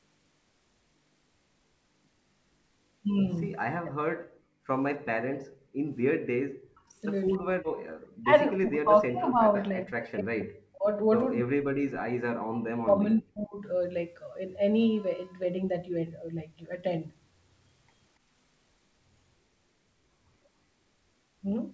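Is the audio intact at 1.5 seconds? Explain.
Yes, the speech at 1.5 seconds is intact, with no dropout, glitch or distortion at that moment.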